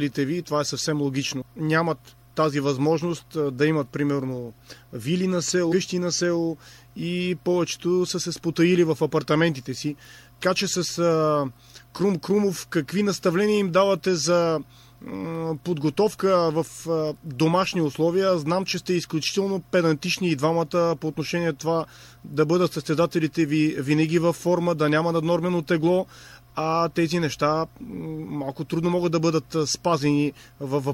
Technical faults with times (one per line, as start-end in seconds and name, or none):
1.41 compressed frames skipped
5.71 compressed frames skipped
10.42 compressed frames skipped